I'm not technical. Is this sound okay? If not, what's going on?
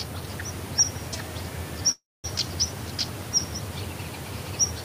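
No. At about 1.91 s the sound stalls for roughly a third of a second, a call audio freeze: the last bit of sound drags on briefly, then goes silent, likely because data arrived late. It resumes at 2.26 s with nothing lost, just running about 0.3 s later.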